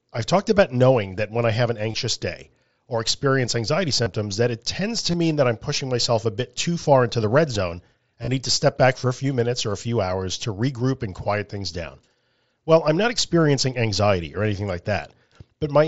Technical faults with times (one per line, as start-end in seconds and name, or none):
1.92-1.94 concealed Bluetooth headset packet loss
4.03-4.06 concealed Bluetooth headset packet loss
5.11-5.14 concealed Bluetooth headset packet loss
8.22-8.28 concealed Bluetooth headset packet loss